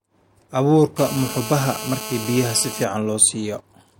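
A speech recording carries GSM phone buzz from 0.99 to 2.85 s: a hard, raspy 217 Hz tone about 11 dB below the voice. A nearby handset's call bursts are being rectified. Spectrograms show evenly spaced harmonic lines, and the waveform shows a steady pulse comb.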